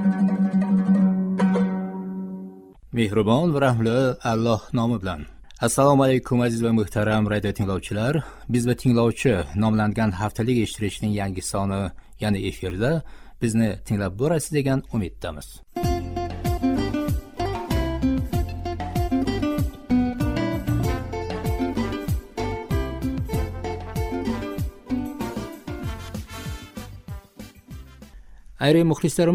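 A repeated buffer occurs at 12.7 s. Fresh audio failed to reach the output in time, so the device replayed the block it had just played, once more, before normal playback resumed. The repeated piece is so short that it doesn't register as a stutter. Instead it comes across as a brief click with a hard edge at the join, which fits a buffer of around 10 ms. Roughly that much new audio is missing from the stream.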